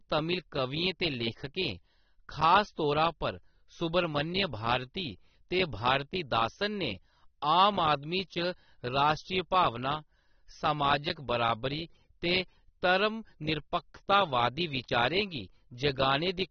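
AAC compression damage runs throughout the speech, from start to finish. Nothing survives above 6.3 kHz, so the sound is dull and muffled, and the damage is plainly audible as a smeared, warbling texture with fizz on sibilants. The likely cause is AAC-LC coding at a low bitrate, which fits roughly 24 kbps: the encoder drops the upper band entirely and quantises the remaining frequency lines so coarsely that detail smears between frames.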